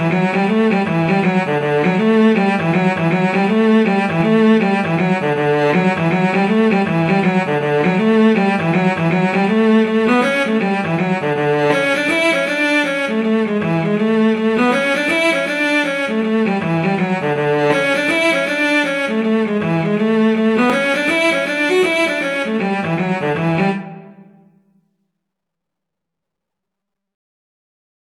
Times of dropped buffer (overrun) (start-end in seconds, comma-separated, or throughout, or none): 20.70